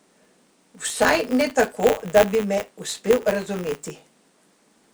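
Buffer tearing runs through the whole speech clip: writer and reader of the audio buffer cross every period, splicing in a sliver of sound from roughly 20 ms earlier. It buzzes robotically at 100 Hz, appearing on a spectrogram as evenly spaced vertical lines and in the waveform as small regular discontinuities.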